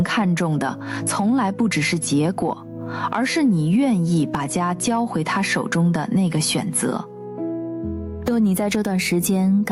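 Gain pumping runs through the whole clip, the level swinging by around 15 dB. A fast limiter likely clamping an over-high input gain causes this.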